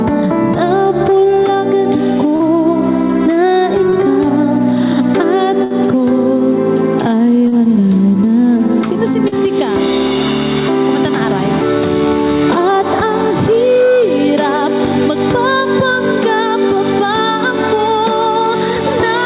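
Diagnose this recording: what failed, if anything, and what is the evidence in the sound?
Short concealed packet loss at the network stage: brief smears at 2.36, 3.90, 7.48 and 9.28 s. Each 20–40 ms hole is rebuilt by continuing the preceding sound, from its pitch if voiced and as shaped noise if not.

Burst of packet loss from 5.64 to 5.72 s: about 60 ms never arrived. The last sound was continued and turned down, visible as a shrinking envelope below the 4 kHz call-band ceiling.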